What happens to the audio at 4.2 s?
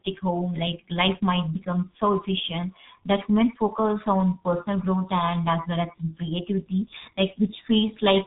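At 4.2 s the speech is still passing through the G.723.1 codec that runs the whole clip. Its long frames and slowly updated voice model, at a rate that fits about 6 kbit/s, cut everything above 3.8 kHz and heavily damage the signal, leaving it muffled and hoarse with smeared consonants.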